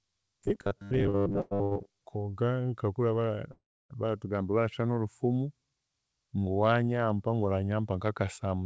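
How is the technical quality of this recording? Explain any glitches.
The recording has several delivery glitches, clustered in the first two seconds with one longer break later. The speech is band-limited, with nothing above 8 kHz, which fits a G.722 call path.

From 0.01 to 2.02 s there is robotic sound from repeated short buffers. The likely cause is audio arriving too seldom, so the software kept replaying a tiny slice, about 10 ms long, while about half of the real audio was skipped. The speech becomes a rigid, metallic 100 Hz buzz.

There are two short stalls from late packets, at 1.10 to 1.25 s and 1.63 to 1.73 s. In each, a packet missed its moment and the jitter buffer ran dry. The receiver stretched the last sound for 40 ms and then 80 ms, so the sound is briefly held, though nothing is lost.

There are two call audio freezes, at 1.41 to 1.53 s and 3.52 to 3.92 s, likely caused by packets held up in transit. 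The receiver filled 100 ms and then 378 ms by extending the last sound. In the longer freeze that fill fades into about 300 ms of silence. Playback then resumes where it stopped, inserting a gap without dropping content.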